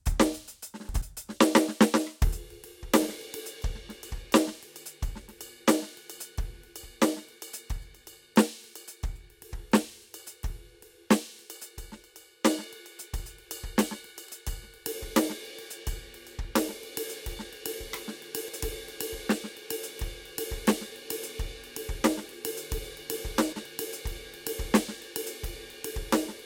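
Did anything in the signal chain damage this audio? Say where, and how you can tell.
Yes. Frames out of order, from the network or streaming stage. At 0.89–1.02, 14.26–14.32, 18.48–18.61, 22.28–22.34 and 23.52–23.65 s the music flutters briefly. Two adjacent runs of frames arrived swapped and were decoded that way, so each stretch plays with its halves exchanged and no time is lost.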